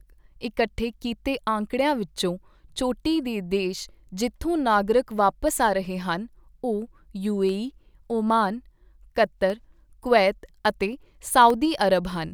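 Starting at 5.48 s, just after "ਦੇ ਦੇਸ਼ ਜਿੱਥੋਂ ਨਾਗਰਿਕ", small clean ticks cut into the speech every 2.0 s, about four of them up to 11.50 s. Each is a gap of well under a millisecond where the signal drops to silence. These are periodic USB or driver dropouts: something on the system stalls the USB bus or the audio driver at a fixed interval, and each stall leaves a brief hole in the stream.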